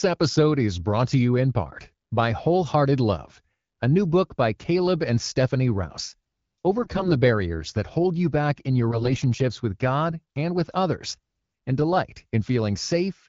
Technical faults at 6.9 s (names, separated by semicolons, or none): AMR bit errors